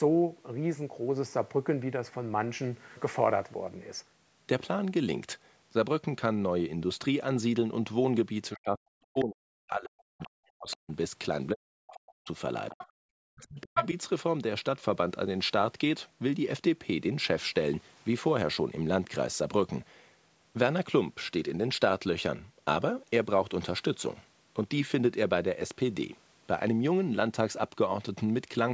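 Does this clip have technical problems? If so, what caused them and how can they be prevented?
Yes. The speech is suppressed in double talk from 8.51 to 10.9 s, 11.53 to 12.29 s, 12.72 to 12.82 s and 13.29 to 13.84 s. The talker's speech sinks sharply, nearly vanishing at its deepest. The echo canceller likely mistook overlapping talk for echo and turned everything down. Tuning the echo canceller's double-talk detection, or using a headset, prevents this.

The other side's voice leaks through at 10.22 to 10.27 s, 10.71 to 10.76 s, 12.7 to 12.89 s and 13.75 to 13.86 s. The earlier scraps are faint. The last is as loud as the speech. The loudspeaker sound was likely not fully cancelled from the microphone. Headphones, or a lower loudspeaker volume, prevent it.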